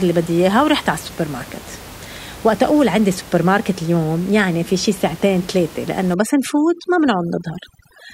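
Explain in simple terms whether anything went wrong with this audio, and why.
Yes, something goes wrong near the end. From about 6.14 seconds to the finish, overdone noise removal kicks in: a noise reduction tool set far too strong starts clamping down on any frequency it mistakes for background hiss. Quiet bits of the speech get dragged down with it, and the background drops and breaks up into little twinkling specks.

Before that point you can hear some room noise under the speech. That's just the sound of the space the microphone was in, not a system fault.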